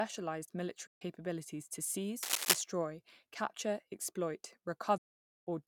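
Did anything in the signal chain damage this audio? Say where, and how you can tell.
Yes. The speech cuts to silence twice: from 0.87 to 1.02 s (about 140 ms lost) and from 4.98 to 5.47 s (about 490 ms lost), just after "capture exploit". This is likely a Bluetooth dropout at the wireless link to the headphones, where runs of consecutive audio packets arrived too late and were discarded. The holes have abrupt edges or a fade of a few milliseconds, and the speech resumes further on as though it had kept playing, which separates this from an edit or a buffer stall.

From 2.23 to 2.62 s, a dense, uneven burst of scratchy rustling sits over the speech, roughly 5 dB louder than the speech itself. It is cable scratch noise, likely from a worn cable, connector or control in the analogue wiring being moved so that its contact resistance fluctuates rapidly. Unlike a dropout, the speech keeps running underneath. 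The irregular, gritty texture also sets it apart from steady hum or from clicks, which are single impulses.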